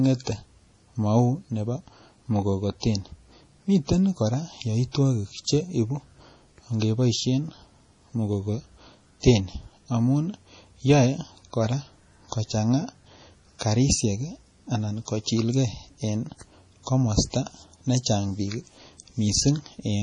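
From start to finish the speech carries heavy coding damage, most likely from MP3 compression at a low bitrate, which fits around 32 kbps. With too few bits, the encoder has cut everything above about 10.5 kHz, so the top end is dull, and weak frequency lines flicker on and off between frames. The result is a watery, swirling texture, metallic chirps on s sounds, and softened, smeared onsets of syllables.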